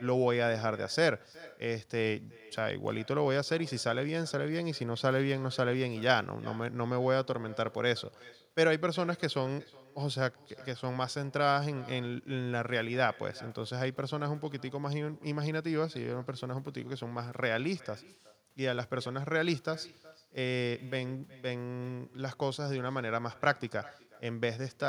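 From start to finish, the speech has echo with no canceller. The far end plays it through a loudspeaker and its microphone feeds it back unremoved. Each phrase returns after roughly 400 ms. The copy sits about 23 dB down. It sounds thin.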